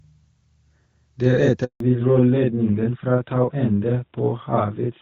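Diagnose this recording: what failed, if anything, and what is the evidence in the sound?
Channel delay (doubling), in the driver or buffer stage: throughout, every sound is followed by an equal-level copy 40 ms later, a mono-summed slap rather than room reverb.

Handover gap, in the network: at 1.64 s the sound dies quickly, leaving 160 ms of true silence until 1.80 s, not the smeared concealment of packet loss.

Fallback to narrowband, in the codec: from 1.80 s nothing remains above 4 kHz and the sound turns duller and rougher, a codec switch rather than an equalisation change.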